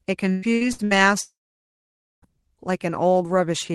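A speech recording with two transmission faults. From 0.31 to 0.94 s, repeated packet loss (robotic sound) leaves four choppy gaps, the longest 112 ms. The spectrogram shows smeared, repeated frames between broken speech. From 1.21 to 2.25 s, the sound turns into a fading buzz or hiss and then about 0.9 s of near-silence, likely a long network dropout. The waveform flattens until speech resumes with that part missing. Above this, the spectrum stops near 12 kHz throughout, which fits a super-wideband call codec.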